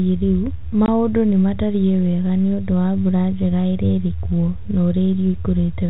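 At 0.86 to 0.88 s, packet loss filled with silence: a single 20 ms packet went missing over the G.711 telephone line, leaving a short hard-edged hole.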